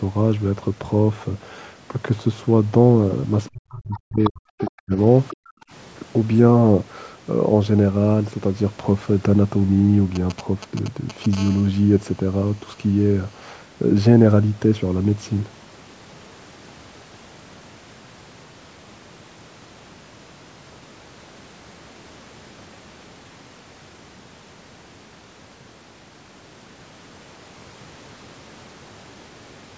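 From 3.51 to 4.97 s there is speech suppressed in double talk, likely because the echo canceller could not separate the talker from loudspeaker echo while both sides spoke and so turned everything down. The speech dips, by up to about 40 dB, and breaks up for roughly a second in total.

Inside and just after that stretch, the other side's voice is leaking through in short scraps at 3.94 to 4.00 s, 4.24 to 4.30 s, 4.58 to 4.71 s and 5.29 to 5.36 s. A second voice sits some 10 to 20 dB below the talker, likely residue the canceller left in the microphone signal.

Right after the last scrap, from 5.36 to 5.71 s, the background is gated by the echo canceller. It clamped the microphone while the loudspeaker played, so the room sound falls away by about 40 dB for a bit under half a second before returning.

From 10.15 to 11.35 s come GSM signalling bursts. A nearby 2G phone transmitting short groups of radio pulses was rectified by the audio circuit, giving a galloping dit-dit-dit of brief 217 Hz buzzes about 15 dB below the speech.

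Immediately after, from 11.37 to 13.46 s, this turns into steady GSM phone buzz as the phone settles into a call and pulses continuously at 217 Hz. The result is a hard, raspy, harmonic-rich buzz about 27 dB below the speech, unrelated to anything said.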